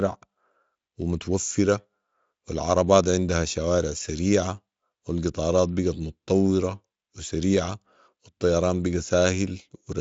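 Nothing in this speech clip stands out as a fault. It comes across the way a high-rate Speex stream would, around the 34 kbps setting, and the audible band simply stops near 7.6 kHz.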